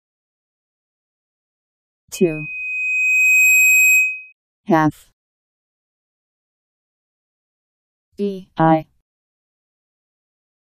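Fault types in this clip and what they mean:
Loudspeaker feedback squeal: a microphone picks up the loudspeaker it feeds, and near 2.5 kHz the loop gain exceeds one, so that frequency keeps reinforcing itself. From 2.14 s a thin tone swells over roughly one and a half seconds into a squeal about 5 dB above the rest of the audio, then stops at 4.33 s. On a spectrogram it is a single bright horizontal line at 2.5 kHz that intensifies as it grows, while the waveform's envelope swells steadily.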